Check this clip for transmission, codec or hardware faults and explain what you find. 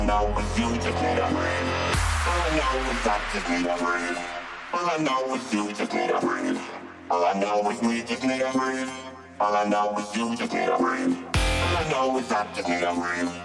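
Nothing stood out on listening, and no point in the clip called for a closer look.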